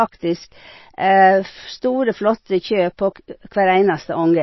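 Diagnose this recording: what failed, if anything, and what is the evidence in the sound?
The codec stage is the likely cause: MP3 compression at a very low bitrate. Throughout the speech the treble stops abruptly at about 5.8 kHz, and the damage is plainly audible as a watery, swirling texture with smeared consonant attacks. Short of bits, the encoder discards everything above a fixed cutoff and zeroes weak frequency lines that flicker on and off between frames. A cutoff that low fits an encode around 24 kbps.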